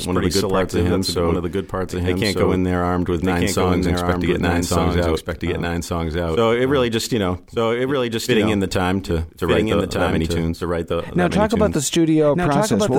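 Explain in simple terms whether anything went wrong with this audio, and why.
The speech is heard twice, all the way through: a second, equally loud copy of every sound arrives about a second behind the first, so the two talk over each other like an exact echo with no fading or room sound to it. This is a doubled audio track, most likely because the same sound was picked up a second time through a slower route, or an edit left two copies out of line.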